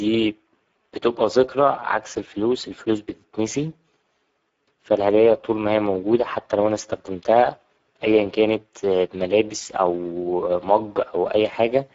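It's a speech recording with Speex codec damage running the whole way through, and it's plainly audible. The speech has that grainy, hoarse CELP texture you get when the excitation is starved of bits, which fits a low-to-middle setting of roughly 10 kbps. The top end stops dead at about 7.7 kHz, and what sits above 4 kHz sounds like shaped noise filling in the band rather than real detail.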